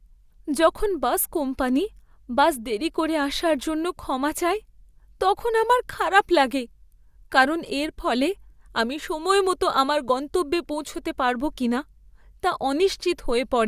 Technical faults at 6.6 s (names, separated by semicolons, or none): none